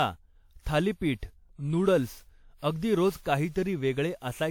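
Throughout the speech, generation loss: swirly, hollow, smeared texture and blurred attacks, likely from roughly seven successive lossy re-encodes, consistent with a 96 kbit/s WMA chain.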